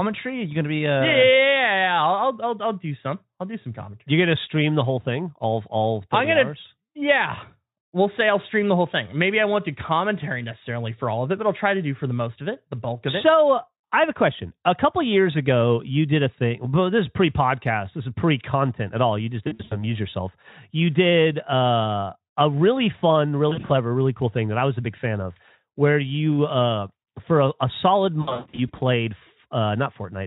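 VoIP packet loss concealed by the speech codec breaks up this speech clip at 19.43 to 19.85 s, 23.49 to 23.72 s and 28.21 to 28.80 s. The gaps are scattered, with the longest single run at about 120 ms near 28.2 s. The decoder fills each hole by extending the last pitch and filter at falling gain, so the speech turns into a buzzy tone or coloured noise and fades, then stays weak briefly after packets resume over a Speex link that otherwise shows little coding damage.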